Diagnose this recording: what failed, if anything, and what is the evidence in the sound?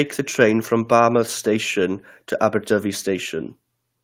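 No audible fault found.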